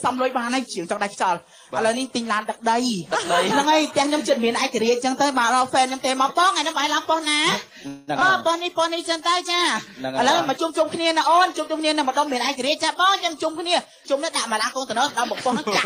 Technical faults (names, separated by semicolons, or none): call audio freeze; skip ahead; jitter buffer slow-down